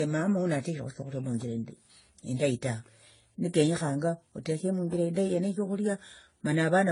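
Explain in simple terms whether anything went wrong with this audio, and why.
Yes. The recording was likely squeezed by one compression format after another, a fault called transcoding between lossy codecs. Each step discards detail to save space, and each later step has to work around damage left by the one before while adding flaws of its own. In this speech, from start to finish, everything above about 10.5 kHz is missing. The different compression flaws are heard layered together.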